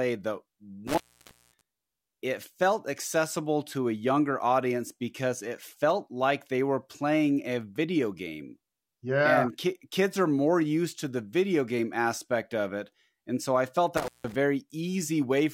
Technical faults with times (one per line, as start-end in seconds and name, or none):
0.87-1.61 intermittent contact
13.97-14.35 intermittent contact